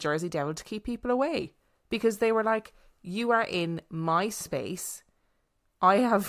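No technical faults can be heard anywhere in the speech. Nothing in the audio points to a problem in how it was captured, processed or delivered.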